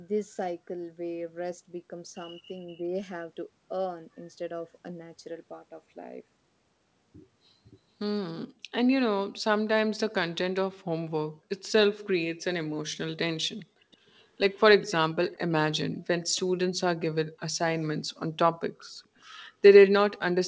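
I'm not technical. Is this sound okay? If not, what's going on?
No. There is an echo leak: faint, broken-up scraps of the speech return about 0.43 s late, at 13.59–13.65, 13.91–14.11, 14.53–14.61, 14.82–14.92, 15.28–15.52 and 19.16–19.2 s. The likely cause is a loudspeaker on the other end whose echo canceller let some sound through. Unlike room reverberation, which blends smoothly into the sound, these are separate delayed copies.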